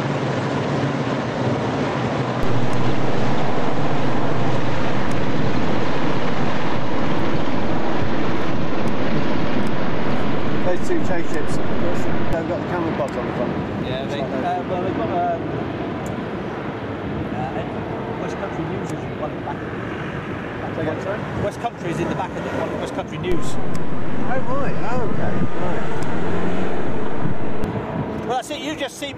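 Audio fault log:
2.43–12.33 s, DC step: the zero line jumps by about −13 dBFS and returns, each transition giving a low thump while the sound continues unchanged.
23.32–27.64 s, DC step: the baseline shifts by about −12 dBFS, then steps back, producing a dull thump at each edge.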